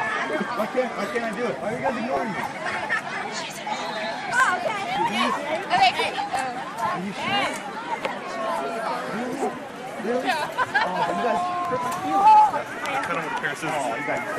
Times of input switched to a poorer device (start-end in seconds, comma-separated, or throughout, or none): none